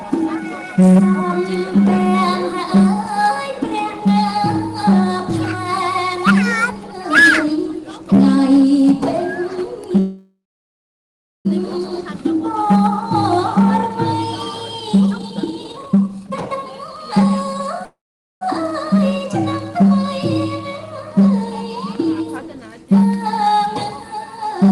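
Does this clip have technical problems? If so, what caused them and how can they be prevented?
Yes. A call audio freeze occurs at 9.99 to 11.47 s and again at 17.85 to 18.43 s. The sound is stretched into a fading buzz or hiss that drops to silence for about 1.06 s the first time and 0.45 s the second. It then resumes exactly where it stopped, with nothing lost. The likely cause is delayed packets draining the jitter buffer, which adds 1.46 s and then 0.56 s of delay. A steadier network path with less congestion prevents this.

A jitter buffer speed-up runs from 15.07 to 17.82 s. The audio plays at 147% of normal speed while keeping its pitch, so it sounds hurried. The receiver held more audio than it needed. It trimmed many small pitch-period slices in a row, cutting about one and a half seconds to bring the delay back down. Preventing the delay spikes that cause these bursts avoids the need for this catch-up.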